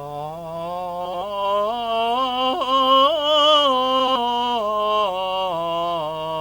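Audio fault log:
throughout, video or display buzz: a 50 Hz field-rate buzz with hash above it, roughly 30 dB under the music, plus a 15.6 kHz line tone from display coupling. A spectrogram shows harmonic stripes every 50 Hz and a steady line at 15.6 kHz.
1.05–1.22 s and 4.00–4.17 s, frames out of order: at each spot two adjacent blocks of about 80 ms play swapped, giving a garbled flutter. The waveform shows abrupt discontinuities, and the spectrogram shows vertical smears where the blocks meet, with no time lost.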